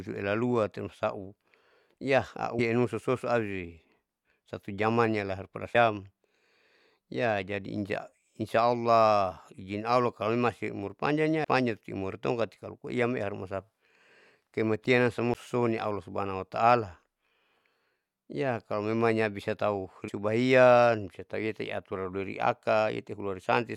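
Damaged data in a compressed stream causes brief glitches in this speech at 2.58 s, 5.74 s, 11.43 s (just before "panjang amori tongkati kalo"), 15.34 s (just before "suso allah") and 20.07 s (right after "ya kalomemanya bisa tahu"). Each is a blip under 20 ms. Corrupted bytes in the encoded stream make the decoder misread a frame and lose sync, so the audio is disrupted until it locks onto the next valid frame header.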